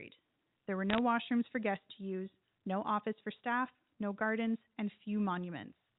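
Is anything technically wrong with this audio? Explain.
Yes, there are bit errors on a digital phone line between 0.90 and 0.98 s, just before "washrooms for guests to". Flipped bits (a few per thousand) each corrupt one sample of the telephone-band signal, giving sharp ticks and brief crackle. The waveform shows isolated single-sample spikes, and the spectrogram shows thin vertical streaks across the band up to 4 kHz.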